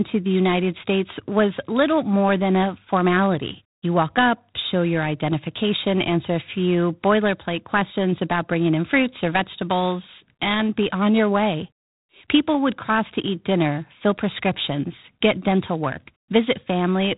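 From start to finish the speech carries G.726 ADPCM damage. Nothing passes above 3.8 kHz, and a harsh, rasping hiss rides on every syllable, swelling with loud passages and falling away in pauses. That comes from coding each sample as a coarse difference from a running prediction, at a depth that fits 24 kbit/s. Unlike steady background noise, the grit tracks the speech level, and there is none of the swirly, warbling smear of perceptual codecs.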